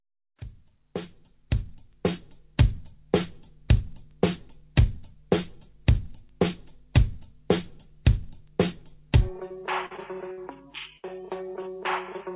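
Audio carried over a narrowband call path, with nothing above 4 kHz, which fits a G.711 A-law codec, shows two kinds of loss. From 9.48 to 10.39 s, repeated packet loss hits four times, with the longest hole about 54 ms. Each gap is patched by extending the previous sound, so about 15% of that stretch is filled in and it turns choppy. At 10.97 to 11.05 s, a burst of packet loss drops about 60 ms. The receiver stretches the last sound into a held, fading fill before the audio resumes with that piece missing.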